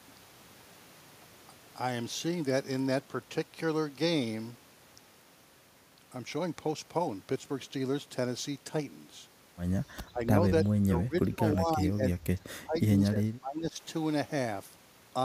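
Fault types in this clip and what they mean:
speech suppressed in double talk: from 10.09 to 13.78 s the speech ducks by up to about 25 dB, likely echo-canceller gain cuts; the waveform envelope shows deep notches and the spectrogram fades.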